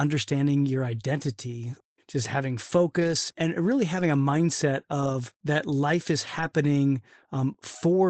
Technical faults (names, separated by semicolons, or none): lost packet rebuilt from error correction; short concealed packet loss